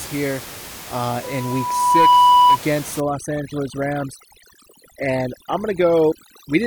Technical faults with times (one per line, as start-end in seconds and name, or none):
1.23-2.58 loudspeaker feedback squeal
3.00-6.67 overdone noise removal